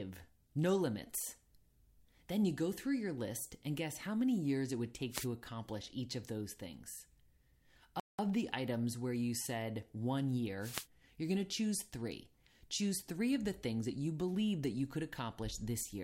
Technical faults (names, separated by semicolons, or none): wireless microphone noise hit; playback stall